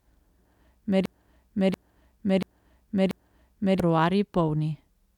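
From 1.06 to 3.80 s, a broken-record loop repeats one 0.69 s fragment four times, likely from stalled playback. The waveform shows identical back-to-back blocks, and the intended audio is lost.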